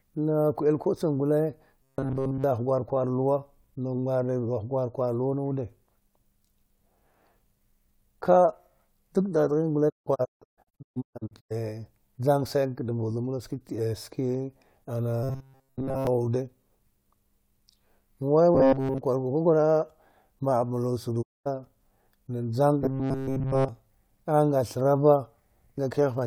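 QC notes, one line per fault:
1.82–2.44 s, 15.23–16.07 s, 18.55–18.98 s, 22.82–23.69 s, robotic sound from repeated short buffers: fresh audio likely reached playback too slowly, so the software kept looping a fragment of about 7.5 ms in place of the skipped material. That fixed period imposes a steady 134 Hz buzz, making the speech sound metallic and mechanical while loosely tracking its shape. Nearly all of each span is looped, except the 18.55 s burst before "gur kwakwara ma’a", where most is. The last burst ends just before "a’a nga".
9.88–11.52 s, 21.21–21.48 s, digital broadcast dropout: the receiver lost the signal or rejected corrupted frames and muted until clean data returned, fading in and out over about 20 ms each time. Just after "dad ghin gule", the sound breaks into scattered holes across 1.6 s, totalling about a second of missing audio, with no single gap longer than 160 ms. 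Later, about 0.22 s disappears within a quarter-second window. The speech sent during these gaps is gone.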